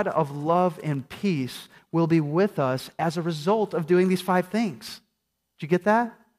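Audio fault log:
No faults can be heard anywhere in the speech. No time marks or values need logging for this recording.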